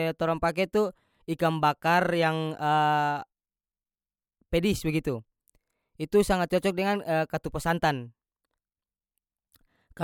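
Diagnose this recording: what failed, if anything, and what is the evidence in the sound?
Nothing failed: no stage in the chain, from wiring and conversion through processing, transport, storage and playback, leaves any audible trace on the speech.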